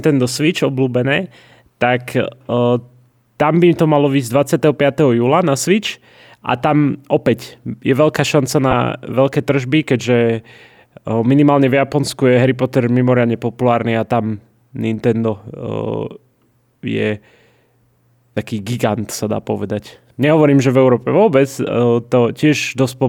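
At 8.71 to 8.73 s and again at 18.35 s, lost LE Audio frames leave brief noisy smears, roughly 15 ms each, where the LC3 decoder refilled missing speech with sign-randomised repeated spectrum.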